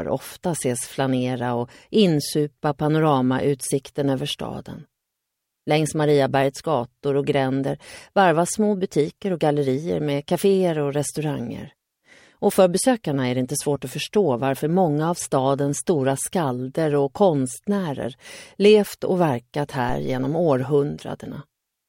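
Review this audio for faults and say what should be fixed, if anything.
A phantom power thump occurs from 19.89 s to 20.39 s: phantom power or another supply was switched on or off on a live input, and the sudden voltage step passed through the coupling capacitors into the signal path. The result is a deep, low-frequency thump peaking at about -20 dBFS that dies away with a decay of roughly 112 ms, cutting across the sound. To prevent it, mute the channel or pull the fader down before switching phantom power.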